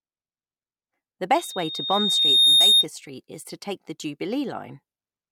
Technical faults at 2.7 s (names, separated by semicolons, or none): loudspeaker feedback squeal